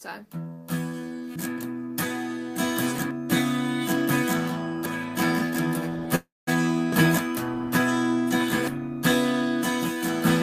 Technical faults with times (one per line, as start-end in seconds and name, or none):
1.36 audio missing between chunks
3.11 audio missing between chunks
6.15-6.49 call audio freeze